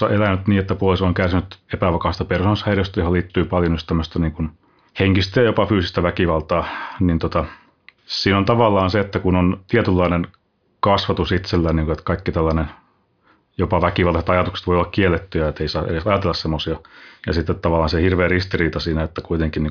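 Nothing technical goes wrong anywhere in this stretch of speech, so there's no fault to point to at any moment.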